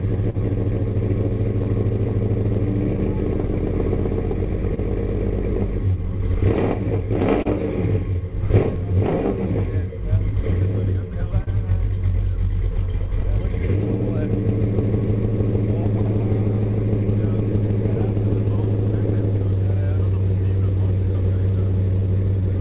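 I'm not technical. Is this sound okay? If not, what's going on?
No. Three related timing problems run through the clip.

Clock drift between sender and receiver is the underlying cause. The sending device's clock runs roughly 2 percent slow compared with the receiving one. Sound therefore arrives a little too slowly to keep the playback supply topped up, so small timing hiccups recur unevenly from start to finish.

Repeated timing corrections are the receiver's response. From 3.34 s to 22.42 s it keeps repeating tiny slivers of sound to stretch what it has, adding about a third of a second in total. This can make the pace feel faintly unsteady, with occasional slight stutters.

Scattered short gaps appear where bits of sound went missing and were patched by extending the last sound. From 0.3 to 4.79 s there are about ten, the longest around 40 ms. From 6.54 to 8.78 s there are about four, and from 11.44 to 13.24 s about three, each up to roughly 30 ms. 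They come across as brief ticks or smears. The phone-call connection itself, which cuts everything above 4 kHz, contributes the muffled top end.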